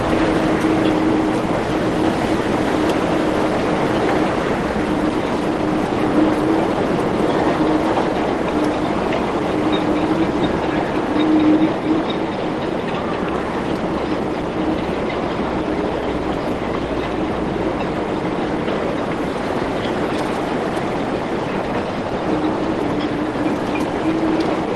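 No technical faults are audible.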